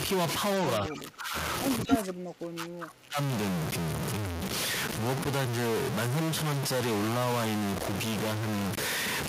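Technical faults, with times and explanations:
Throughout, stuck bit: a distortion rides on the speech for the whole clip, and the pauses never go truly quiet but fill with a gritty noise floor. This is likely one bit of the sample data held at a fixed value, so about half the samples are pushed off by a constant step. On a waveform, quiet stretches show a steady offset or fuzz instead of a flat line. A spectrogram shows a broadband haze across all frequencies, even between phrases.
0.8 to 1.35 s and 1.84 to 3.18 s, speech suppressed in double talk: the talker's level falls away in two spans, by around 20 dB in the first and around 25 dB at worst in the second, with parts thinning or dropping out in pieces. This is likely an echo canceller that could not tell the local voice from loudspeaker echo while both sides spoke, so it turned everything down. The waveform envelope sags sharply in these spans. 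The spectrogram shows energy fading.
1.88 to 2.03 s, echo leak: a brief delayed copy of the voice slips through, lagging the original by 229 ms and sounding about 5 dB louder than the direct speech. This is likely a loudspeaker-side echo canceller letting part of the returned signal past. It comes just as the second suppressed span begins. On a spectrogram, the harmonic pattern repeats, shifted about a quarter second later. The waveform shows a short extra burst overlapping the dipped speech.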